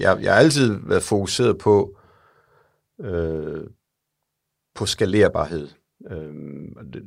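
No technical faults can be heard anywhere in this speech recording.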